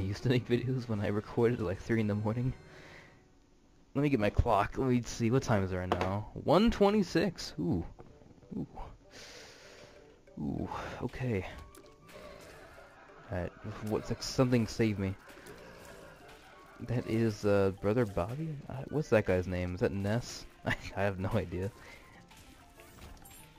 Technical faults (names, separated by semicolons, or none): none